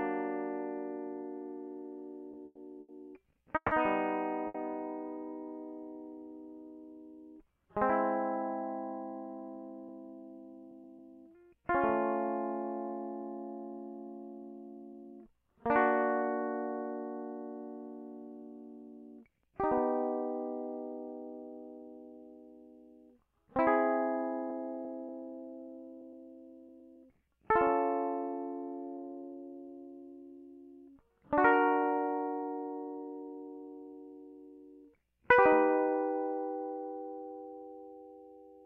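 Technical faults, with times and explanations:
2.31 to 4.57 s, repeated stalls (stutter): the music hangs five times in just over two seconds, the longest hold lasting 150 ms, as packets arrived late and the jitter buffer kept running dry. Each gap was filled by continuing the last sound, about 430 ms in all and roughly a fifth of that span, so nothing is lost but the rhythm drags and catches. On a spectrogram the filled gaps show as short frozen, horizontally smeared blocks, and the waveform shows repeated near-identical cycles where the music's movement stops.
19.21 to 19.62 s and 23.27 to 27.59 s, jitter buffer speed-up: the buffer had built up surplus delay, so the receiver trimmed many tiny pitch-period-sized pieces to catch up. The first stretch plays at 112% speed, dropping about 50 ms, and sounds noticeably rushed. The longer one runs at 102%, losing about a tenth of a second, a subtle push in tempo. 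The pitch stays put, so spectrogram harmonics keep their height while onsets crowd slightly closer, and the waveform shows small seams where cycles were cut.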